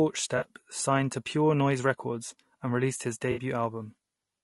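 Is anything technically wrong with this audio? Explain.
Yes. Two faults can be heard in this speech clip.

Throughout, the voice has a rough, grainy texture, with noise filling the gaps between harmonics and a thin, synthetic-sounding top band. This points to low-delay AAC compression, likely AAC-ELD at a low rate, around 32 kbps. Its short frames resolve pitch harmonics poorly, so the coder spends too few bits on harmonic detail. Unlike a dropout, this damage is steady across the whole clip.

There are also two brief patches of AAC frame loss with concealment. The first runs from 0.37 to 0.45 s, just before "signed to", and lasts about 40 ms, which fits two lost frames. The second runs from 3.31 to 3.41 s, right after "and released his", and lasts about 60 ms, consistent with three frames. In each case the decoder rebuilt the missing audio from the last good spectrum, so the sound smears into a noisy, phasey blur instead of cutting to silence or clicking.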